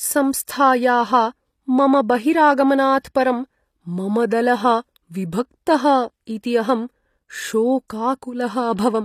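A speech recording with HE-AAC compression damage that is plainly audible from start to finish. The sibilants sound gritty and metallic, and the treble has a synthetic brightness that does not match the lower voice. Nothing is present above 15 kHz. The likely cause is spectral band replication: the codec stores the lower band and rebuilds the highs by copying lower bands upward, so the harmonics no longer line up. The damage fits a low bitrate, around 24 kbps.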